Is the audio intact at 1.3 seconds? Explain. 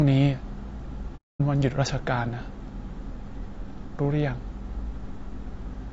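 No. From 1.16 to 1.41 s the sound drops out in AAC frame loss with muting: about 240 ms of frames went missing, which fits roughly eight frames, and the decoder zeroed their spectrum. The overlapping windows fade the sound out and back in. On a waveform the amplitude tapers to a flat line, and a spectrogram shows a blank vertical gap with soft edges.

Around that gap the sound is rough and grainy throughout, with noise filling the spaces between pitch harmonics. This is plainly audible low-delay AAC compression, likely AAC-ELD at a bitrate that fits about 32 kbps, whose short frames resolve harmonics poorly. A spectrogram shows smeared harmonic lines over a hazy floor.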